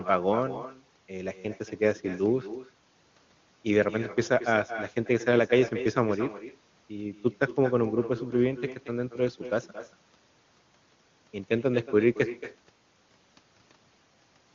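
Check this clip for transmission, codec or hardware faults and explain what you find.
One fault runs through the whole clip: echo with no canceller. The far end's loudspeaker output is picked up by its microphone and returned uncancelled, so every phrase is followed about a fifth of a second later by a thinner copy roughly 13 dB quieter. The wideband codec carrying the speech adds at most faint coding damage.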